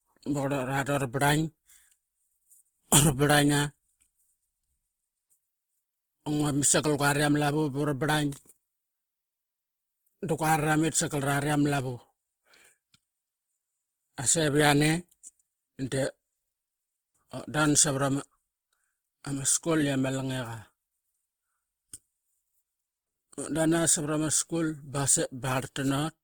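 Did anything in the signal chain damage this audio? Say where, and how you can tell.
Yes. The damage sits at the codec stage and runs through the whole speech clip. The sound is noisy, rough and grainy rather than swirly, with bands filled in instead of left as holes. The damage is plainly audible, yet content still reaches about 20.2 kHz. That points to Opus compression, likely in its fullband CELT music mode. Band energies are kept, but starved bands are folded or noise-filled, which fits a low bitrate around 16 kbps.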